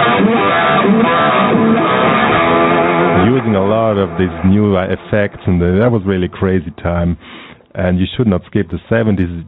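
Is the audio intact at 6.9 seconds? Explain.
No. At 6.9 s, as through the whole clip, there is gain pumping, likely from input gain set far too high with a fast limiter or compressor clamping down whenever the level peaks. The gain swings by roughly 10 dB, so loud and quiet passages sit squashed together. Separately, the band stops at 4 kHz, which fits a 64 kbps G.711 mu-law call path.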